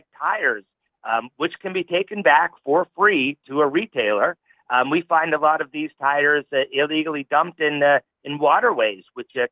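Nothing here sounds technically wrong; the audio holds steady all the way, with no problems to point to at any moment.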